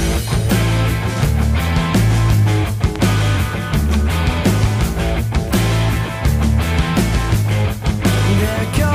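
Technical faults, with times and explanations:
2.96–2.98 s and 3.94–3.96 s, loud pop: two separate single pops, each a sharp hit roughly 10 dB above the sound, which carries straight on underneath. A brief voltage spike, likely from a switch, static or a driver glitch, got added to the signal.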